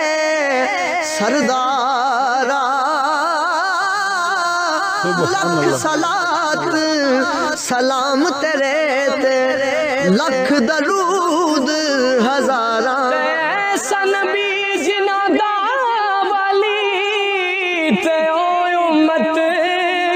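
Nothing goes wrong anywhere in this one, so there's no technical fault to point to at any moment in the audio.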